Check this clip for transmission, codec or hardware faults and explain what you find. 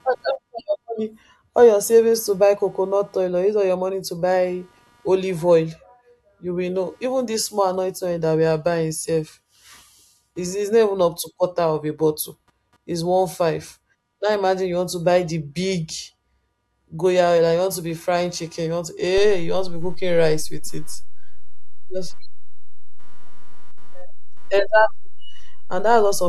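Two hardware faults are present in this speech recording.

Computer activity noise runs through the whole clip: a buzzing, chirping pulse train repeating at around 200 Hz, sitting roughly 40 dB below the speech. Processor, graphics or mouse load currents disturb the shared ground, so the pattern follows the computer's activity rather than the talker.

A DC step occurs at 19.18 s. The waveform's zero line jumps by about -18 dBFS and holds at that offset until the end. The jump is heard as a single low thump, and the speech continues unchanged across it. This points to a converter recalibrating or an offset-carrying input being switched in.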